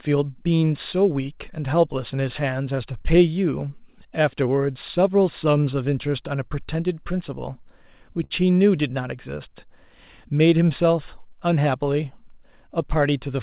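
At 8.24 s, running to 8.33 s, there is a short stall from a late packet. A packet did not arrive in time, the jitter buffer ran dry, and the receiver kept the last sound going for about 60 ms until the packet came in. Nothing is cut out, unlike a packet-loss dropout. Instead one sound lingers slightly too long with a faint buzz or dip, and everything after it lands about 60 ms later than it otherwise would.

From 12.42 to 13.21 s there is a jitter buffer speed-up. Audio had built up in the buffer, so the receiver trimmed it back by cutting out many tiny pitch-period-sized slices in a row, about 50 ms in total. The sound plays at about 107% speed and comes across as slightly rushed. Pitch stays the same, which separates it from a resampling or tape-speed error. It is heard as a brief quickening. Throughout the clip, nothing is heard above 4 kHz, which fits the G.711 mu-law narrowband codec of the call path.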